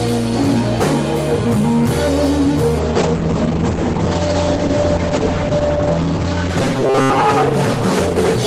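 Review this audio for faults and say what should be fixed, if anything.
A call bitrate drop begins at 2.81 s and lasts to the end of the clip. The encoder's rate falls from 40 kbps to 9 kbps, bottoming out for about 2.6 s, so the sound is coded coarsely and its bandwidth shrinks from 20 kHz to 8 kHz. The result is rough, watery and dull. Unlike a plain low-pass filter, it adds smeary coding texture as well as losing the top end, and there is no fixed pitch. Smoother bandwidth estimation and a higher minimum bitrate would prevent it.

From 6.62 s to 7.25 s, a rigid metallic buzz at 133 Hz sits over the sound and follows it only loosely. This is robotic sound from repeated short buffers. The likely cause is audio arriving too seldom, so the player loops its last fragment of about 7.5 ms and skips roughly half of the real audio. The steady 133 Hz pitch separates it from the bitrate drop's shapeless blur. 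Deeper jitter buffering and proper concealment instead of buffer repetition would prevent it.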